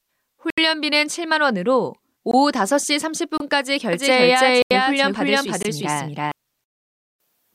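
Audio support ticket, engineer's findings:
Block of digital silence: output buffer not filled in time, samples zeroed. Hard cuts to silence at 0.50–0.58 s (74 ms), 3.38–3.40 s (26 ms), 4.62–4.71 s (85 ms), 5.63–5.65 s (21 ms). Short holes in the speech. 85 ms and 21 ms gaps fit 4096- and 1024-sample buffers.

Doubled audio track: likely a second, slower capture path or an out-of-step edit mixing the audio in twice, 3.93–6.32 s. Full-band copy at roughly equal level, around 300 ms behind, no decay or room colour. Copy starts and stops abruptly.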